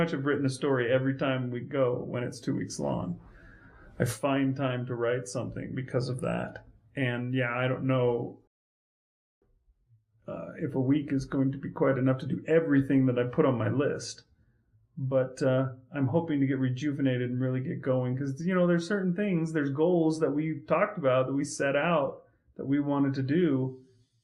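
At 8.47 s the sound cuts to silence until 9.42 s, then resumes exactly where it stopped: a rebuffering stall, the player starved of downloaded audio, adding about 0.94 s.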